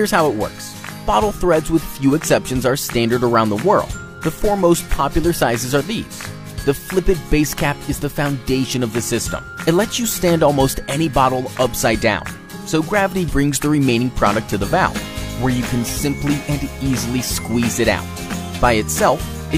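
No technical faults can be heard anywhere in the audio.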